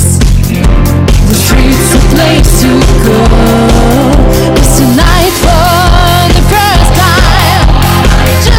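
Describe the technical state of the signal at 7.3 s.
At 7.3 s the signal is still in hard clipping, as it is for the whole clip. The level reaching some stage in the chain is about 9 dB higher than that stage can pass, so every peak is sliced flat at the ceiling, and nearly a third of the samples sit pinned there. Those squared-off tops add strong upper harmonics, so the sound at this moment carries a harsh, gritty fuzz on all its louder parts.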